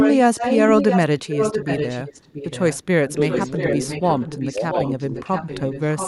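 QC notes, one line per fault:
0.00–0.18 s, 0.35–2.83 s, 3.14–5.81 s and 5.98–6.08 s, echo leak: a delayed copy of the speech trails it by about 0.68 s. It sits roughly 5 dB under the talker at first and drops to about 10 dB under from 3.14 s. Likely a far-end speakerphone whose echo canceller isn't catching everything and is sending it back.
3.05–3.12 s and 4.51–4.62 s, speech suppressed in double talk: two brief dips, the first about 15 dB deep and the second about 10 dB. Each one lands while the far side's sound is playing over the talker, so it's likely the canceller getting confused by both at once and ducking the real speech.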